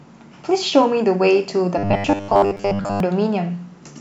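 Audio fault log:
1.78–3.00 s, robotic sound from repeated short buffers: the speech becomes a rigid, metallic buzz locked at 100 Hz, likely from audio arriving too slowly so a roughly 10 ms chunk is replayed for most of that span. Unlike a pitch shift, it follows natural intonation only roughly.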